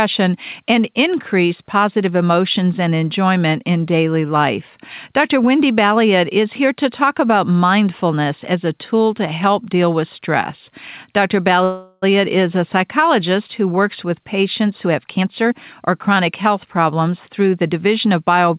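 At 11.64 s there's a call audio freeze. The sound stalls and the last bit of it is stretched into a fading buzz or hiss until 12.04 s, about 0.4 s in all, before picking up cleanly with "is a psychologist oncologist". Nothing seems lost; it's a pause pushed into the stream. The likely cause is packets getting held up in transit, so the jitter buffer ran dry and the receiver had to fill in with what it had.

Then, right after "oncologist who works with", from 14.63 s to 18.14 s, there's a jitter buffer speed-up. The buffer was holding more audio than it wanted, so it trimmed tiny pitch-period-sized slices over and over, roughly 0.4 s in total. The pace runs about 10 percent fast with the pitch unchanged, so it comes across as rushed. Throughout, the audio is band-limited with nothing above 4 kHz, which fits a G.711 A-law call path at 64 kbps.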